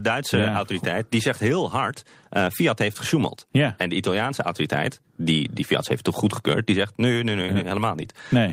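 No audible technical faults anywhere in this recording.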